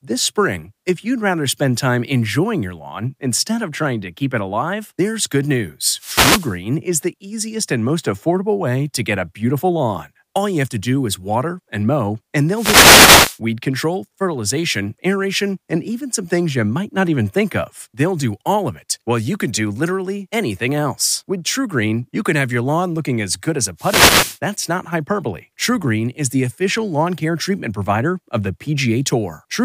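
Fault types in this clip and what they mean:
Wireless microphone noise hit: The radio link from an analogue FM microphone fades when reflected signals cancel. Receiver noise then rises over the speech. Here it is heard as short swishes of static. The first runs from 5.94 to 6.58 s, after "it alive there's good". The second spans 12.53 to 13.39 s, after "water and mow and". The third lasts from 23.77 to 24.39 s, after "as good as a".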